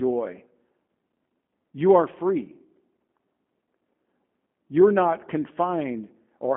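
Throughout, plainly audible G.729 codec damage: the speech is rebuilt from a vocal tract model, sounding rough and synthetic, which fits an 8 kbit/s coder, with nothing above 3.8 kHz.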